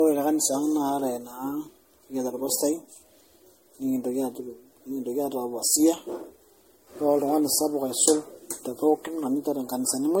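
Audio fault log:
throughout generation loss: swirly, hollow speech with blurred attacks and nothing above 16.5 kHz, too smeared for one MP3 pass; likely about seven re-encodings.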